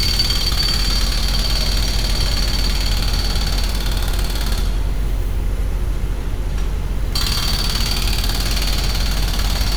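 No technical faults are audible.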